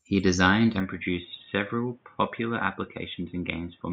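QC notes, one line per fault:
0.8 s to end, input switched to a poorer device: from 0.8 s the speech turns dull and boxy, with nothing above 3.8 kHz, a level drop of roughly 5 dB, and new background noise sitting around 40 dB below the signal, with no silence at the change. The likely cause is the capture jumping to a narrower-band microphone or headset call profile. A spectrogram shows the upper band cut off abruptly at 0.8 s, and the waveform envelope steps down.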